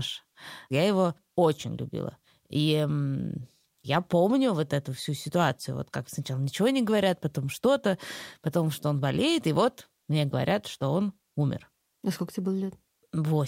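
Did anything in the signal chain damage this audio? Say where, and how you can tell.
No, nothing along the chain has left a mark on this speech recording that I can hear, so there's no stage to point at here.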